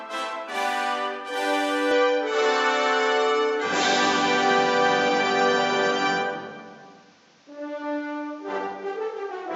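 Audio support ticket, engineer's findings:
Music dulls abruptly at 1.91 s through end, no gap, level steady; likely input switched to a poorer device. Spectrogram: content cut above 7.4 kHz, new noise floor roughly 35 dB down.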